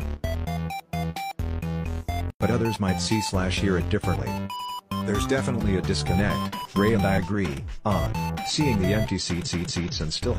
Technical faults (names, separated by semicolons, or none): repeated frames